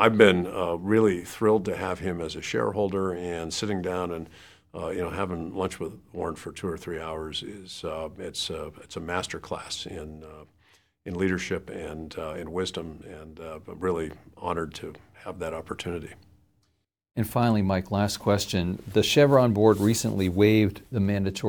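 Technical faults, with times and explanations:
No technical faults detected.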